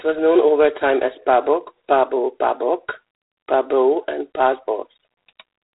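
The speech has passed through G.726 ADPCM coding, and the roughness suggests its 24 kbit/s mode, three bits per sample. The codec sends only a coarse difference from an adaptive prediction, so the quantisation error is large and rides on the signal. Through the whole clip this gives a harsh, rasping hiss that swells and falls with the speech level, plainly audible, and nothing above 4 kHz comes through, leaving the sound dull and telephone-narrow.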